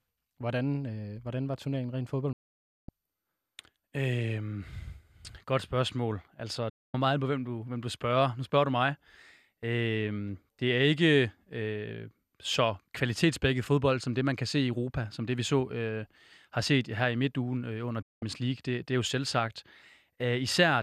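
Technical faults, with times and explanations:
2.33 to 18.22 s, digital broadcast dropout: the speech cuts to silence three times, at 2.33 to 2.89 s just after "hvordan var turneringen rent", at 6.70 to 6.94 s just before "meget på hvem du", and at 18.02 to 18.22 s after "i midtugen øh under". Each cut fades in about 3 ms and lasts 0.55, 0.24 and 0.19 s. The receiver muted while frames failed to decode, and the gap lengths fit whole frames of about 24 ms. The speech sent during each gap is lost.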